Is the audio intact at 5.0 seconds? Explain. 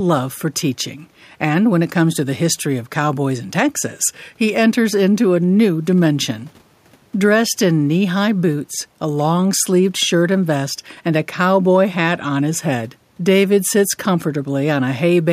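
Yes, the audio is intact at 5.0 seconds, with only the room's own background noise sitting about 41 dB below the speech.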